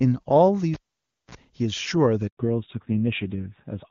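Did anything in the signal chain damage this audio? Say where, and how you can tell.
Yes. Cable pulled and plugged in, 0.74 to 1.35 s, in the analogue wiring: a pop, about 0.56 s of near silence, a 44 ms burst of 60 Hz mains buzz as the tip touched, then a second pop.

Handover gap, 2.27 to 2.37 s, on the network: the sound fades out quickly and stays silent for 100 ms because no frames arrived while the call switched links.

Fallback to narrowband, from 2.37 s to the end, in the codec: all content above 4 kHz disappears and the sound turns duller and rougher, which fits a drop from wideband AMR-WB to 7.4 kbit/s AMR-NB.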